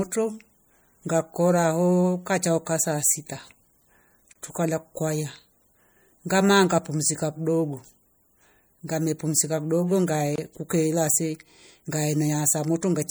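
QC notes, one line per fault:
Throughout: MP3 compression. The speech has a watery, swirling quality, with metallic chirping on s sounds and softened attacks. The likely cause is an encoder short of bits, which fits a rate around 64 kbps: it cuts the treble at a fixed frequency and drops weak spectral lines, and those lines flicker on and off from frame to frame. The codec damage is plainly audible.
4.33–4.36 s and 10.36–10.38 s: gap at a join of encoded pieces. A gap of 28 ms, then 24 ms, cuts through the speech with smeared edges, and the sound resumes where it stopped. The gaps fall about 6 s apart, which points to pieces encoded separately and joined untrimmed. Each piece keeps its encoder's start-up delay and end padding, so silence opens at every join.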